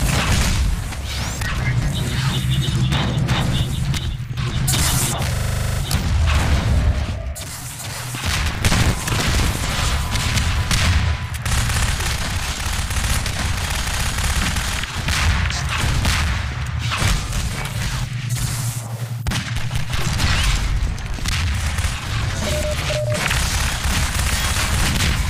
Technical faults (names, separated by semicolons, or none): system hang loop; processor overload crackle